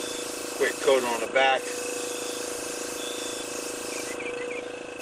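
The signal shows no technical faults at any point.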